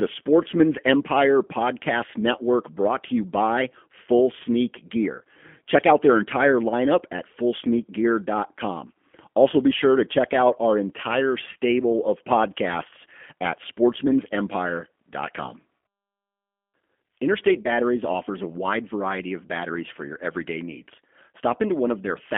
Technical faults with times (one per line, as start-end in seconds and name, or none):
0.00-22.37 G.729 codec
5.19-5.22 VoIP packet loss concealed by the speech codec
15.43-15.55 VoIP packet loss concealed by the speech codec
17.63-17.71 VoIP packet loss concealed by the speech codec